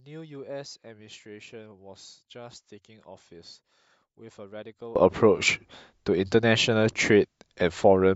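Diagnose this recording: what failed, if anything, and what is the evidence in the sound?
For the first 4.96 s the speech nearly vanishes in mono, about 24 dB down, leaving a faint residue until it snaps back. That points to one channel inverted, likely a polarity swap in the analogue wiring: the shared centre content cancels when summed.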